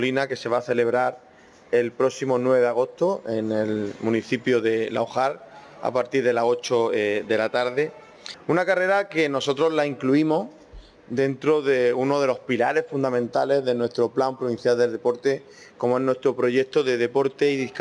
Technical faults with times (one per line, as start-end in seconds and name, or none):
none